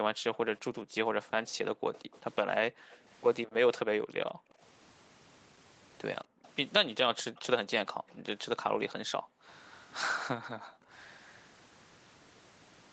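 From 0.1 to 4.61 s, the room sound behind the speech repeatedly dips and drops out, falling by as much as about 40 dB for roughly a second and a half in total before springing back. This is background gated by the echo canceller: while the far end's loudspeaker was active, the canceller pulled the microphone down hard, taking the ambience with it, and released it once playback stopped.

Between 1.94 and 2.97 s, a faint delayed copy of the speech trails the original by 215 ms, sitting roughly 25 dB below it. This is an echo leak, likely from a loudspeaker on one side whose echo canceller failed to fully remove what its microphone picked up, so the leftover was sent back down the line.

The same gating returns from 6.25 to 10.91 s, again dropping the background by up to about 40 dB, this time for around two seconds in total.

Within that stretch, from 6.46 to 7.41 s, the echo leak comes back, delayed by 232 ms and about 30 dB under the speech. 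A final short leak appears from 10.94 to 11.31 s, delayed by 248 ms and equally faint. The delay grows from 215 to 248 ms across the three leaks, so the echo sits slightly further behind the speech each time it returns.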